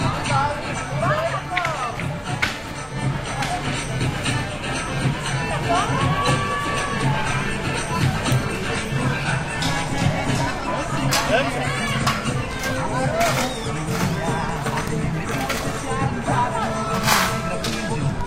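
Everyday sound recording with one corrupt frame decoded. At 6.25 s a short burst cuts in and ends by 6.29 s, about 40 ms in all. It sounds like a harsh chirp or blip that does not belong to the scene. Its length fits roughly two damaged compressed frames. Flipped bits led the decoder to misread gains or codes. That put energy at wrong frequencies. The error peaks fairly loud, near -10 dBFS.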